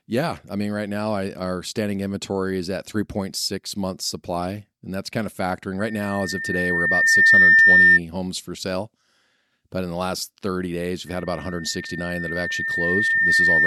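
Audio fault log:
5.79–8.00 s and 11.06 s to end, loudspeaker feedback squeal: the mic–speaker loop exceeds unity gain at 1.8 kHz. The tone swells over one to two seconds, showing as a bright horizontal spectrogram line, louder the first time.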